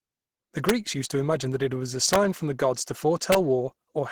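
Throughout, the speech sounds hoarse, rough and muffled, with grainy texture; this is likely Opus compression in its hybrid mode, consistent with about 16 kbps. At 0.69 s, 2.13 to 2.16 s and 3.32 to 3.35 s, violent cracks burst out, far sharper than clipping: integer overflow, where peaks pushing barely past full scale wrap to the opposite sign.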